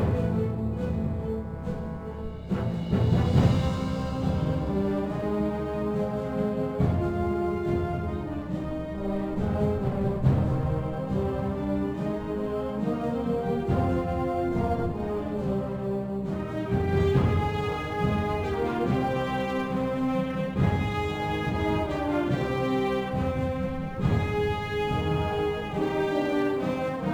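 Crude rate conversion runs throughout. Samples were dropped unfiltered, fitting a 48 to 44.1 kHz change. This leaves a gritty, inharmonic fizz roughly 35 dB down.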